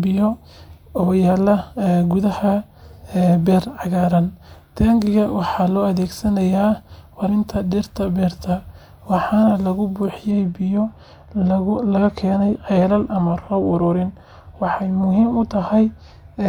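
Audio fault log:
7.25 to 7.29 s, damaged data in a compressed stream: for about 35 ms the speech breaks up briefly. Some of the encoded bytes at this point are corrupt, so the decoder cannot read those frames properly. It produces garbled output or skips them, loses its place in the stream, and hunts for the next valid frame header before normal decoding resumes. That brief resynchronisation is what makes the sudden glitch.
10.31 to 16.49 s, de-emphasis applied wrongly: from this point to the end the speech turns dull and muffled, with about 11 dB less level at 10 kHz than at 1 kHz. A treble-cut filter meant to reverse pre-emphasis was applied even though the signal had none to undo, or was applied a second time. The loss rises steadily toward the top of the spectrum, so sibilants and consonant detail lose their crispness without any sharp cutoff.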